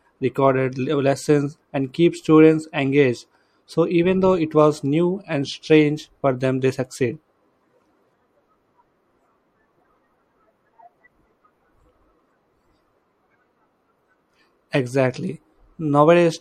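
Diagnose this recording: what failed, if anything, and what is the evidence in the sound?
Codec stage: MP3 compression throughout, likely from a bitrate near 64 kbps. The treble is cut off, s sounds chirp metallically, and weak detail swirls in and out between frames.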